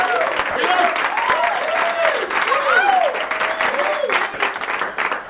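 At 0.5 to 0.56 s, 4.34 to 4.40 s, 4.58 to 4.61 s, 4.94 to 4.97 s and from 5.24 s to the end, the sound briefly gives way to steady, featureless noise for 30 to 60 ms each time. This is likely sound dropped by the voice detector, which judged the audio to be background and stopped sending while the receiver filled in comfort noise. On a spectrogram each gap shows the detailed texture replaced by a flat, even wash capped at 4 kHz by the G.711 call path. The waveform shows a low, uniform band in place of the envelope.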